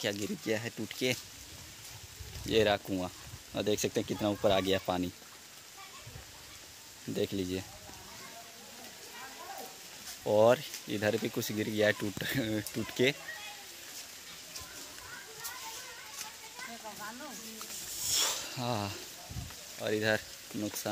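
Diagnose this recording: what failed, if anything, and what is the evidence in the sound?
Nothing in the chain failed: no stage shows a fault, and no time in the recording gives evidence of one.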